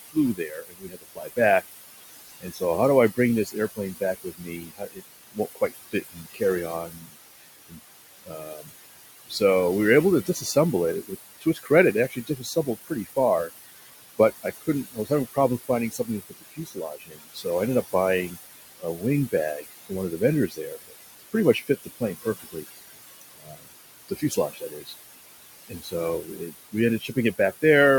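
Noise suppressor artifacts run through the whole clip: the suppressor pulls steady-noise bands down by about 18 dB frame by frame, so the room noise, sitting about 11 dB under the speech, sinks between words and rises under them. Speech cut by the noise suppressor occurs at 0.01–1.69 s, 2.41–2.62 s, 3.15–8.69 s, 9.28–9.41 s, 10.26–22.65 s, 23.21–24.94 s and 25.69–27.63 s. Quiet consonants and word endings are mistaken for noise and dropped by about 15 to 21 dB, so they sound swallowed, adding up to several seconds in the longer stretches.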